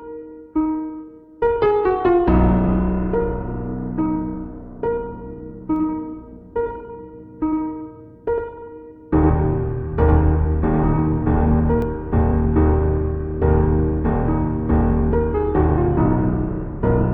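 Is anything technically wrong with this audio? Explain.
Yes. From 5.76 to 11.82 s there's a doubled audio track: a dry copy trails roughly a tenth of a second behind, about 5 dB down, likely from a second capture path.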